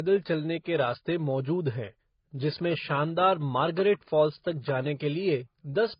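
Throughout the speech, nothing is present above 5.1 kHz, and two different coding textures overlap. This points to transcoding between lossy codecs, likely a low-rate AAC pass then MP3. A spectrogram shows a flat ceiling at 5.1 kHz with blotchy, fragmented energy below.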